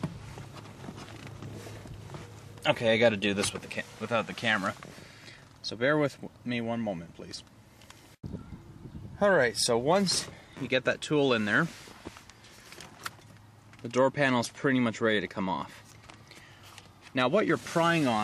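At 3.50 s the sound and its background noise drop together by about 4 dB and stay lower to the end, a sudden gain jump, likely from a level change applied without any ramp.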